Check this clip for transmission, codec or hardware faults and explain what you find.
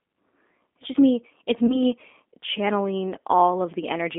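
Two faults are present: codec coloration throughout the speech and a brief concealed dropout near the 1.7 s mark.

The G.729 codec colours the entire clip with a thin, slightly rough and synthetic quality, confined to roughly 250 Hz to 3.5 kHz. The speech is rebuilt from a vocal tract filter, pitch predictor and sparse pulses rather than the real waveform, which fits an 8 kbit/s G.729A stream.

VoIP packet loss concealed by the speech codec occurs from 1.67 to 1.82 s. The speech is briefly stretched and fades, then recovers. About 20 ms of audio is missing, which fits one lost packet. The decoder stretched its last pitch and filter to fill the gap, and because each frame builds on the previous one, the distortion lingers well beyond the gap itself.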